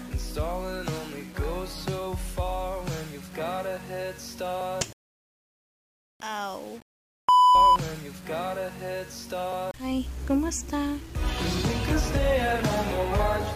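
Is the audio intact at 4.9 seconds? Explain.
No. At 4.9 seconds, as across the whole clip, there is grainy distortion that tracks the sound. The likely cause is low bit depth without dither, which fits about 7 bits rounded straight off. The error sits roughly 25 dB below the signal, so quiet passages turn gritty.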